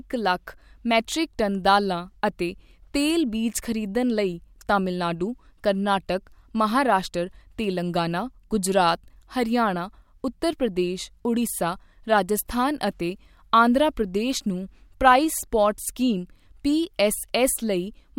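No technical faults can be heard anywhere in the recording, and the signal stays steady and intact throughout.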